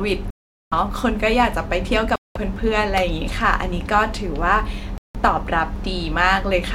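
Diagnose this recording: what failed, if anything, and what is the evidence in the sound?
The wireless link to the headphones likely stalled in a Bluetooth stall: held-up packets let the playback buffer run dry. The speech cuts to silence at 0.30–0.73 s, 2.16–2.37 s and 4.98–5.16 s, gaps of about 0.41, 0.20 and 0.17 s, then resumes.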